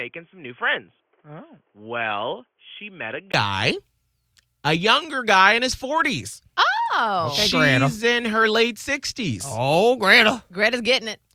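From 0 to 3.34 s the speech sounds boxy, nothing above 3.4 kHz, slightly quieter with faint new background noise. It most likely comes from an input switched to a poorer device. Unlike plain filtering, it clears after a 20 ms silence.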